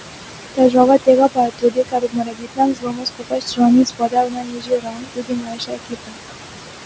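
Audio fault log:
Throughout: noise suppressor artifacts. The suppressor estimates the steady room noise, which sits about 9 dB below the speech, and pulls those bands down by about 21 dB frame by frame. The residue left behind rises under speech and sinks between phrases.
0.55–3.62 s and 3.83–6.18 s: speech cut by the noise suppressor. In each span the suppressor mistakes roughly two seconds of quieter speech for noise and turns it down by as much as about 22 dB. Soft consonants and word endings come out swallowed and faint.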